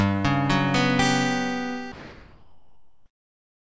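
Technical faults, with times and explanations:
1.92–3.69 s, comfort noise in place of the background: for the final 1.78 s the detailed background, about 39 dB below the loud parts, becomes a steady, featureless hiss at an unchanged level, likely from discontinuous transmission. Unlike with a noise gate, nothing drops to silence.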